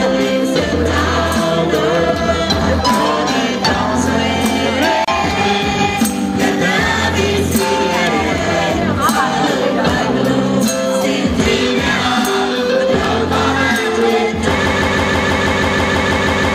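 At 5.05 s there is a gap at a join of encoded pieces. The audio was encoded as separate pieces and joined without trimming, so the encoder's start-up delay and the padding on the last frame of the earlier piece were both left in. The result is a silence of about 31 ms, lasting to 5.08 s, that cuts into continuous sound with abrupt, slightly smeared edges. The sound then resumes exactly where it stopped.

At 8.07 s and again at 14.01 s there is an electrical switching spike. A nearby switch, motor or static discharge likely arced briefly and the audio line picked it up. Each event is a sharp, very short snap sitting on top of the sound rather than replacing it. The one at 8.07 s lasts about 5 ms. The one at 14.01 s lasts about 10 ms.

From 14.66 s to the end there is a broken-record loop. The player, encoder or stream likely stalled and kept resending the last fragment it held. A piece of about 162 ms repeats back to back, roughly a dozen times, giving a mechanical, stuttering pulse at about six repeats per second. 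Whatever should have played in those final seconds is lost.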